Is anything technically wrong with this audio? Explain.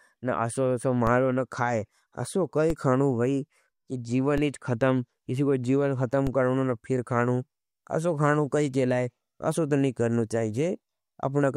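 Yes. A DC step occurs at 1.07 s just before "न खाये असो", at 2.70 s just after it, at 4.38 s, and at 6.27 s between "खतम किसी को जीवन" and "करो न फिर खानों". Each time the waveform's zero line suddenly jumps by about -18 to -19 dBFS. A 20 Hz high-pass then drains the offset away, so the speech carries on with a low thump at each step. On a waveform, the trace lurches off centre and slides back. A spectrogram shows a brief smear at the lowest frequencies.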